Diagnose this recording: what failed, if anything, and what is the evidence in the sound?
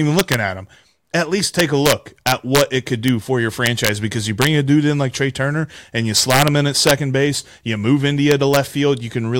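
A fixed-point gain or sample-format conversion stage is letting loud speech peaks wrap instead of saturating, which is integer overflow. Peaks over full scale flip to the opposite sign, producing harsh cracks far sharper than clipping at 0.19–0.34, 1.60–2.61, 3.08, 3.66–3.89, 4.42–4.47, 6.18–6.48, 6.87–6.91 and 8.32–8.57 s. The overdrive reaches about 4 dB, and the bursts are most violent at 1.60–2.61 and 6.18–6.48 s.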